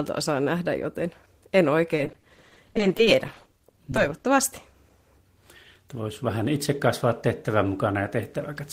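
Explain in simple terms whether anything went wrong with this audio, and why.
Between about 1.95 and 4.26 s there's repeated packet loss, giving that robotic sound. Dozens of tiny dropouts, none longer than 30 ms, got patched by stretching the last bit of sound, so about a quarter of that stretch is filler and comes out choppy.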